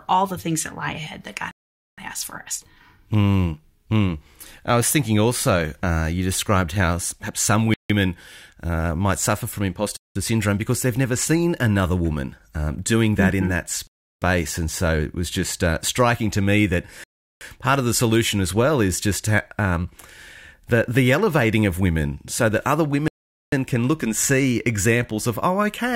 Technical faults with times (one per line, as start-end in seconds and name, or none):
1.51-1.98 Bluetooth stall
7.74-7.90 Bluetooth stall
9.97-10.15 Bluetooth stall
13.87-14.22 Bluetooth stall
17.04-17.41 Bluetooth stall
23.08-23.52 Bluetooth stall